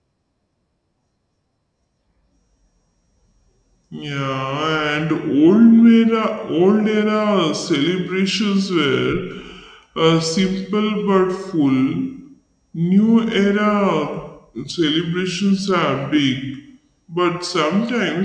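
Speech, slowed and lowered throughout by a wrong sample rate: 0.69 times speed and 6.45 semitones down together, which fits 32 kHz audio played at 22 kHz, unlike pitch-shifting, which keeps timing.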